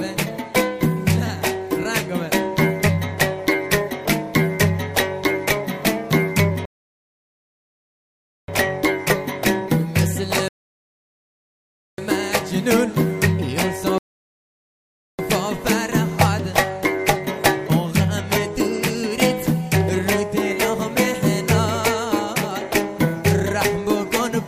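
The player drained its buffer three times, causing rebuffering stalls: the sound drops to silence at 6.65–8.48 s, 10.48–11.98 s and 13.98–15.19 s, then resumes exactly where it stopped, adding 1.8 s, 1.5 s and 1.2 s.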